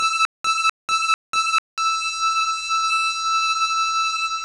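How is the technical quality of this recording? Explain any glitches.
The quality is poor. The music carries heavy coding damage throughout, and it opens with a stutter.

HE-AAC compression: Across the whole clip the treble sounds gritty and metallic. Nothing is present above 11.2 kHz. This is likely HE-AAC at a very low rate, which fits about 12 kbps. The top band is copied up from lower bands, so its harmonics do not line up.

Stutter with silent gaps: From the start to 1.78 s, already under way when the clip begins, a 251 ms burst repeats three times. Each repeat is followed by about 193 ms of digital silence, on a steady 444 ms cycle. A stalled stream likely replayed its last fragment, then ran dry, losing the audio in between.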